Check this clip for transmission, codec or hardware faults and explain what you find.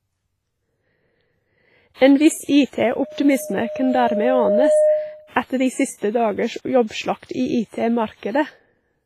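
Two faults are present in this speech clip.

Throughout, heavy codec damage, likely WMA compression at a bitrate around 24 kbps, spreads quantisation noise over long blocks, leaving ringing, washy hiss that breathes with the speech and nothing above 15.4 kHz.

From 2.86 to 5.34 s, a loudspeaker feedback squeal occurs as the microphone picks up its own loudspeaker. The loop gain exceeds one at 611 Hz, so that tone swells over about two seconds to roughly 5 dB above the speech.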